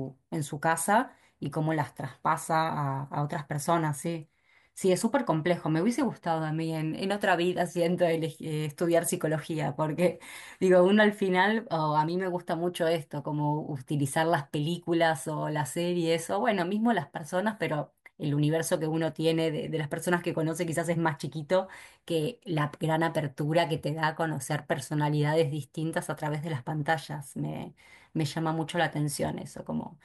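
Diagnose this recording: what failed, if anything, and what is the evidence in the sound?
Nothing in the recording stood out on listening as a failure at any stage of the chain.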